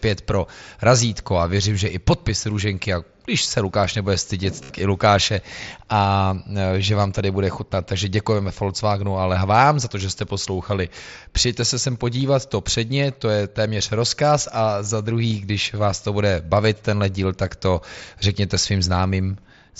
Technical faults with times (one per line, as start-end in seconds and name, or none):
4.63-4.70 concealed Bluetooth headset packet loss
12.20 concealed Bluetooth headset packet loss
15.30 concealed Bluetooth headset packet loss